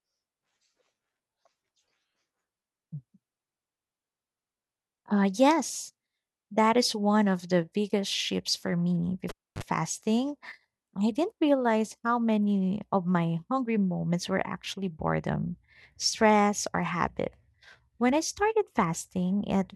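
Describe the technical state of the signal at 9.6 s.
At 9.6 s the signal is in the reconnection phase of a cable pulled and plugged in, a fault spanning 9.29 to 9.63 s, just after "biggest shifts for me". After about 0.29 s of near silence, only the plug tip is touching, so a 46 ms burst of 50 Hz mains buzz leaks in before a second pop restores the sound. A spectrogram shows a stack of 50 Hz harmonics bounded by vertical click lines, and the waveform shows a sharp spike on each side.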